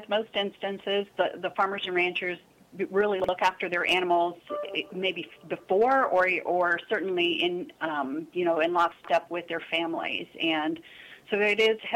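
The audio has two moments of chunks out of order. At 3.20 to 3.29 s, one 43 ms chunk plays one chunk late. At 8.92 to 9.09 s, a chunk lands three chunks late. Nothing is missing. Each spot sounds jumbled, with three hard joins.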